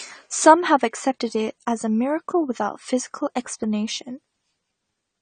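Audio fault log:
Throughout, AAC compression: the speech is dull and smeared, with a fizzy, warbling edge on sibilants and nothing above 9 kHz. This likely comes from an AAC-LC encoder starved of bits, which fits a rate around 32 kbps, dropping the top band and coarsening quantisation.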